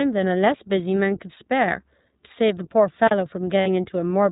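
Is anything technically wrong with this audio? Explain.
Yes, there are three faults. Throughout, the speech carries plainly audible iLBC codec damage. It is band-limited to 4 kHz and sounds slightly rough and synthetic, which fits the 15.2 kbps mode with 20 ms frames.

From 3.06 to 3.11 s, an intermittent contact opens the line for about 38 ms. The sound cuts out with crackle at both edges and faint hiss in between, as a loose connection would produce.

From 3.60 to 3.68 s, lost iLBC frames leave a 60 ms gap, consistent with three 20 ms packets lost. The decoder fills it by repeating the last pitch cycle mixed with noise, so it sounds like a held, buzzy vowel. The speech recovers immediately afterwards.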